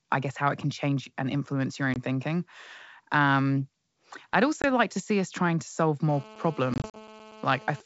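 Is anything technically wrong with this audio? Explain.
Yes. There is packet loss on an ADPCM call at 1.94–1.97 s and 4.62–4.65 s. Each is a 20 ms hard-edged silence, about one packet, after which the decoder's predictor and step size disagree with the sender's, leaving the speech briefly, slightly distorted.

The same packet loss returns at 6.74–7.01 s. About 100 ms of gaps are scattered over roughly 200 ms, the longest run 40 ms, so the audio stutters and briefly distorts.

GSM phone buzz runs from 6.09 to 7.81 s. Bursts from a nearby phone in a call are rectified by the audio circuit, producing a steady, raspy 217 Hz buzz with many harmonics, about 21 dB below the sound.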